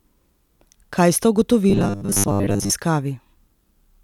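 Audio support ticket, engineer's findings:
Robotic sound from repeated short buffers, 1.70 to 2.72 s: speech collapses into a stiff metallic buzz at 100 Hz, so most of that stretch is repeats. Likely cause is audio arriving too late, with playback looping a roughly 10 ms chunk while real audio gets dropped.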